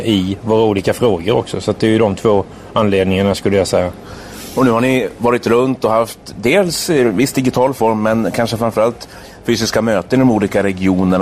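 MP2 compression artefacts run through the whole clip, likely from MPEG Layer II coding at a low rate near 80 kbps. Too few bits leave upper sub-bands switched off or flickering and the remaining bands coarsely quantised, giving dull, gurgling, granular distortion.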